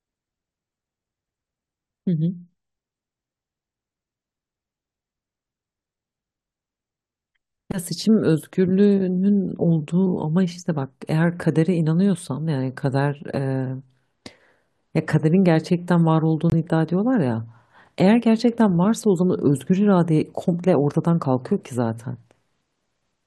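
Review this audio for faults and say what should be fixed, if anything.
There's a corrupt frame muted at 16.50 to 16.54 s: about 40 ms of the speech drops abruptly to silence, a length that fits a few short frames. Bit errors got them rejected by the decoder, the player filled the gap with silence, and timing stays intact. Adding error checking and retransmission or redundancy on the transport, plus packet loss concealment in the player, would keep that hole from reaching the listener.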